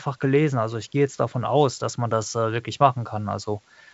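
A speech clip carried over G.722 wideband telephone coding at 64 kbit/s, with nothing above about 7.7 kHz, and nothing technically wrong with it.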